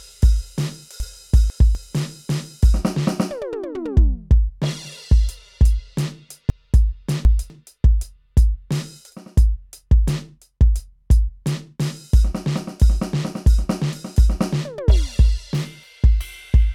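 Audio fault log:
1.0–1.75 s, chunks out of order: one 250 ms chunk of the music arrives two chunks late and plays after the two that should follow it. Nothing is missing, but the passage jumbles briefly, with three hard joins.
6.5–7.5 s, chunks out of order: a 250 ms chunk plays three chunks late, after the three that should follow it, so this longer stretch scrambles with the same three hard seams.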